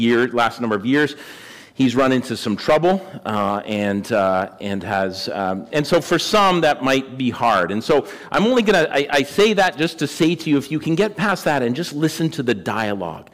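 Hard clipping runs through the whole thing: the signal's been pushed about 12 dB past what some stage could pass, so peaks get sliced flat. Only around three percent of the waveform hits the ceiling, but those flattened tops throw off high harmonics you hear as crackly fuzz on loud moments.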